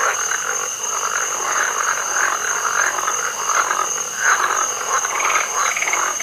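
No technical faults can be heard anywhere in the audio.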